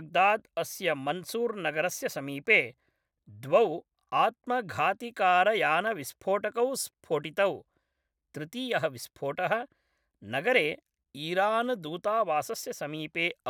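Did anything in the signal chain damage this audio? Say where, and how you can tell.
No, nothing along the chain has left a mark I can hear on this speech; it comes through without any damage I'd point to.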